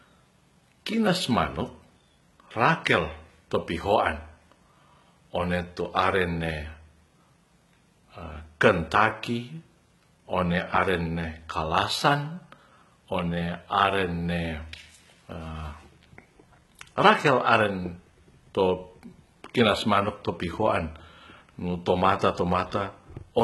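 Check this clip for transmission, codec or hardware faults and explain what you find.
HE-AAC compression, present throughout the speech: the treble is synthetic rather than original. The sound likely passed through an HE-AAC encoder at a very low rate, consistent with about 16 kbps. Only the lower band is properly coded, and the upper range is filled in by copying lower content upward under a coarse envelope, with nothing above 11.8 kHz. The damage is heavy. Harmonics fail to line up across the crossover, so s sounds come out gritty, metallic or lispy.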